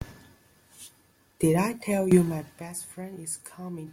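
It's a short bit of speech, and there's nothing technically wrong to point to anywhere in it.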